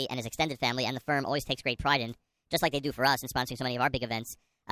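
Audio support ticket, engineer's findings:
Speech high and hurried throughout. Wrong sample rate at playback, no conversion. Runs about 1.45 times fast, pitch up about 6.5 semitones together. Fits 22 kHz material clocked out at 32 kHz. Check stream rate negotiation and resampler.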